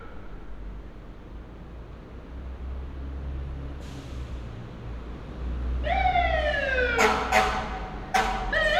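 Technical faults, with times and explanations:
Nothing technical to flag here; the sounds come through without any fault worth noting.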